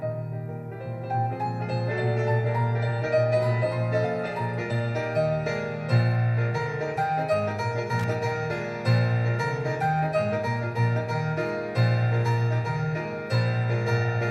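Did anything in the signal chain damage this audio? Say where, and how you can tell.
Yes: a worn or dirty contact in the analogue wiring made and broke the signal path, producing loose connector crackle from 7.99 to 8.04 s. The audio is chopped for about 45 ms, heard as an irregular scratchy burst.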